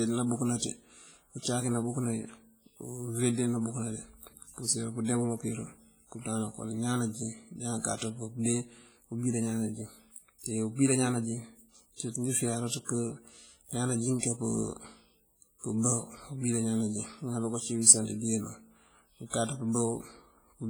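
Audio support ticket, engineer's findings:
Whole clip: ringing, washy speech with a hiss that swells and fades with the voice. Heavy codec damage throughout. Likely cause: WMA compression, an early WMA encoder at roughly 24 kbps. Long transform blocks smear quantisation noise over tens of milliseconds, and weak spectral lines are zeroed, leaving a hollow, swirling texture.

14.19–14.23 s: brief hiss, about 39 ms, ahead of a speech onset, whose attack sounds soft and smeared. Pre-echo from the same transform codec. The attack sits late in a block, and noise sized for the loud part fills the quiet gap before it.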